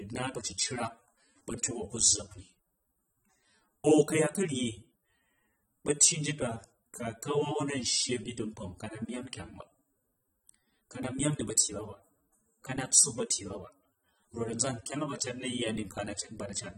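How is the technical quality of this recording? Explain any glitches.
The recording has plainly audible lossy-coding damage throughout. Across the whole clip the speech sounds dull and smeared, sibilants fizz and warble, and nothing is present above 17.2 kHz. This is likely AAC compression at a low bitrate, consistent with about 24 kbps AAC-LC, coarsely quantising each frame's spectrum and leaving holes.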